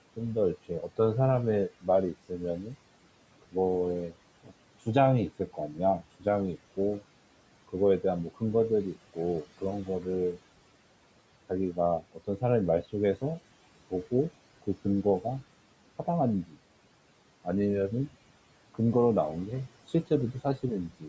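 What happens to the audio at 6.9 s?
At 6.9 s you're inside a stretch, from 0.16 to 10.38 s, where the noise suppressor is cutting into the speech itself. It misreads quieter parts of the speech, like soft consonants and word endings, as background and turns them down with the noise, by as much as about 17 dB at its deepest. Across that span it adds up to roughly a second and a half of speech that sounds swallowed or faded out.

Running under that, and through the whole clip, are the noise suppressor artifacts. The suppressor pulls the steady room noise down by about 18 dB, frame by frame and band by band. So the noise dips away between words and creeps back up underneath them.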